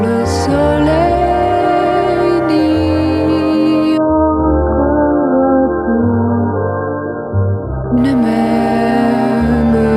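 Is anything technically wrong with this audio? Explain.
Yes. From 3.98 to 7.98 s the adaptive stream falls back to a lower bitrate, consistent with AAC stepping down from about 96 to about 8 kbit/s when the connection slows. Everything above 1.7 kHz vanishes, leaving dull, smeared sound. The quality changes abruptly at both ends, with no gap.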